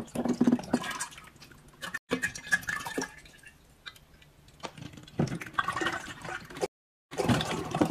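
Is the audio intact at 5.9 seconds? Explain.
Yes, the audio is intact at 5.9 seconds, with no fault present at that moment.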